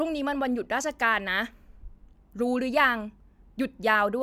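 No technical faults can be heard anywhere in the recording; the speech signal stays steady and intact throughout.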